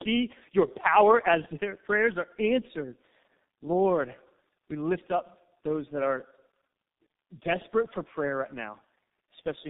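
Tandem speech coding runs throughout the speech: it was decoded and re-encoded by two low-rate speech codecs in turn, compounding rough, muffled, warbly artefacts, with nothing above 3.8 kHz.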